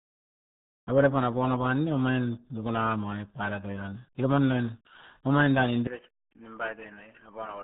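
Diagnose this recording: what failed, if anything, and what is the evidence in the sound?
The codec stage failed. This speech has been through the RealAudio 14.4 codec for its whole length. Nothing above about 3.8 kHz survives, so the sound is muffled and boxy. The codec damage is heavy: consonants smear and vowels take on a gargly, bubbling texture. That points to a very low-rate speech coder, and it fits an 8 kbit/s RealAudio 1 stream. The coder models the spectrum coarsely and discards detail.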